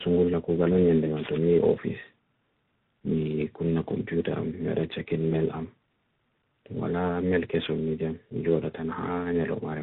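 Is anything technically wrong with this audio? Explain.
Yes. Throughout the speech, the sound is rough, muffled and warbly, with nothing above 3.8 kHz. This is tandem speech coding: the signal points to three speech codecs in a row, CVSD among them, each re-encoding the previous one's already degraded output.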